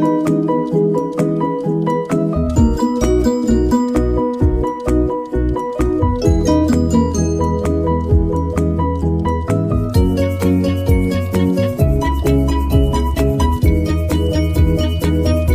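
No technical faults are audible.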